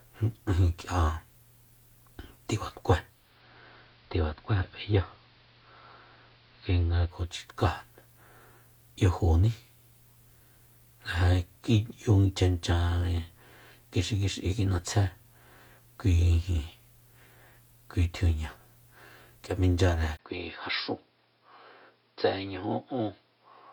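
Speech, with two faults. From 3.01 to 7.48 s there is digital radio blending to analogue. The receiver cross-fades over about 0.43 s to the AM broadcast. The level drops about 2 dB, and hiss rises to roughly 30 dB below the signal. At 20.17 s a 20 ms gap opens. From there to the end, the sound turns dull and roughly 10 dB quieter, with new noise about 45 dB down. The likely cause is an input switched to a poorer device.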